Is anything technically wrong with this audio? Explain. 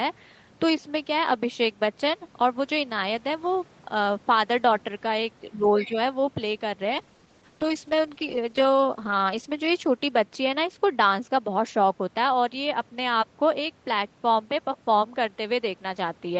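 Yes, there are three faults: a suppression dip with a brief second voice, then a lasting drop in coding quality.

From 5.49 to 5.96 s the speech is pulled down, by about 15 dB at its deepest, over roughly 300 ms in total. This is speech suppressed in double talk, likely caused by both ends talking at once. The echo canceller could not tell the local talker apart from the loudspeaker echo and attenuated everything. The result is audible as the voice ducking and thinning in broken pieces.

Between 5.79 and 5.88 s a short scrap of a second voice sits underneath, around 15 dB below the main speech. This is the other side's voice leaking through, likely because the echo canceller left some of the far-end loudspeaker signal in the microphone feed. Lasting under a tenth of a second, it comes across as a faint fragment rather than continuous speech.

From 6.89 s to the end, the audio turns coarse and smeared. 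This is a call bitrate drop. The sound points to the Opus encoder falling from around 32 kbps to around 9 kbps after the call's bandwidth estimate collapsed, staying at that lowest rate for about 2.3 s. With so few bits, quantisation gets much coarser, giving a rough, watery texture. The top end, already limited to 8 kHz on this call path, dulls further.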